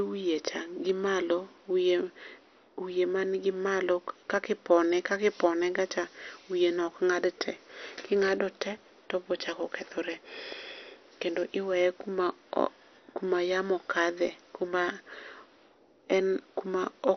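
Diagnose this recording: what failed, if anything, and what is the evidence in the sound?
The codec stage is where things went wrong here. All the way through, the speech sounds dull and muffled, with nothing at all above about 6.2 kHz, and there's a gurgly, grainy texture to it. That's likely MP2 compression run hard: with too few bits, the encoder shuts off its upper sub-bands and coarsely quantises the ones it keeps. The heavy damage points to a low bitrate, somewhere around 48 kbps.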